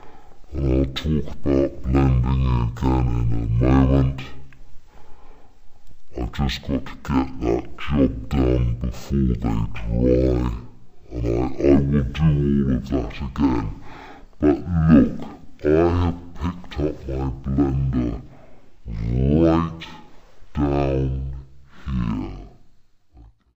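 From the first moment to the last, the audio runs at half speed and sits an octave low, a drop of 12 semitones. This is stereo read as mono. The file holds left and right samples interleaved, but they are being read in sequence as one channel. Each stereo pair becomes two consecutive mono samples, so playback is stretched to twice its proper length. Everything sounds slow, heavy and deep for the whole clip.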